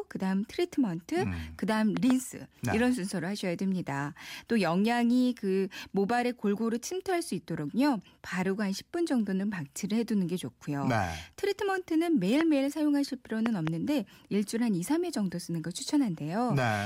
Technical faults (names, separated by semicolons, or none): loud pop